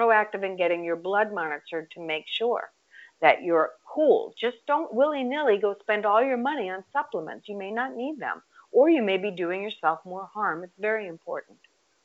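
Speech over G.722 wideband telephone coding, with room noise sitting about 47 dB below the speech; no technical faults are present.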